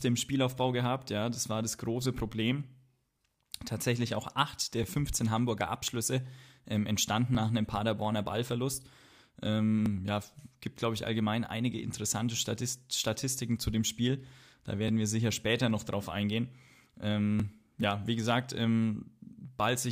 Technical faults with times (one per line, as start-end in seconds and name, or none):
4.84 overlapping chunks
7.35 overlapping chunks
9.86 overlapping chunks
12.37 overlapping chunks
14.88 overlapping chunks
17.40 overlapping chunks